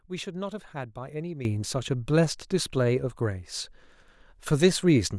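Sudden gain jump at 1.45 s in this speech clip: level rises about 12 dB instantly and stays there, likely a digital gain change applied without any ramp.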